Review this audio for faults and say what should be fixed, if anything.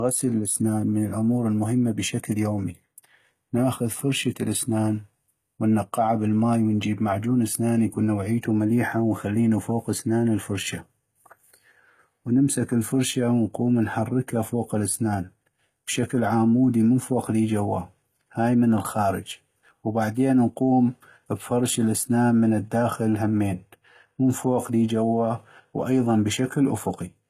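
The whole clip has that gritty, lispy treble on the s sounds, with nothing above 14.9 kHz, likely from HE-AAC compression. The top end is rebuilt from copied lower bands rather than coded, so the harmonics don't line up, which fits a low bitrate around 20 kbps. Encoding at a higher bitrate, or with plain AAC, would keep the treble genuine.

From 19.63 to 19.83 s there's a burst of processor overload crackle. The processor fell behind and skipped a run of short buffers, which fits buffers of around 5 ms, leaving hard-edged gaps that tear through the speech for about a fifth of a second. A larger buffer or less background load during recording would prevent it.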